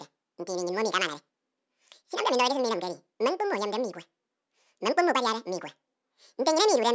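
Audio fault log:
throughout, wrong sample rate: the speech runs at twice its natural speed and sits a full octave (12 semitones) high, sounding squeaky and rushed, which fits 8 kHz material being played back at 16 kHz with no conversion. On a spectrogram every harmonic and formant sits at double its normal frequency, the content reaches up to 8 kHz instead of stopping at 4 kHz, and the syllables are squeezed to half their width along the time axis.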